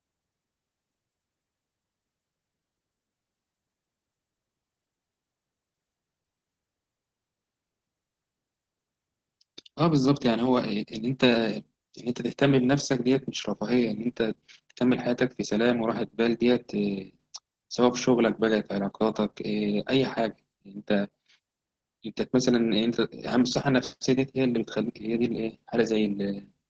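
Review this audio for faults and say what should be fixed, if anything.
Heavy Opus voice compression throughout: the SILK coder squeezes the speech into a band ending at 8 kHz and codes it coarsely, which fits roughly 10 kbps. The speech sounds muffled, hoarse and slightly robotic. A spectrogram shows a hard ceiling at 8 kHz and blurred harmonics. To prevent this, encode at a higher Opus bitrate.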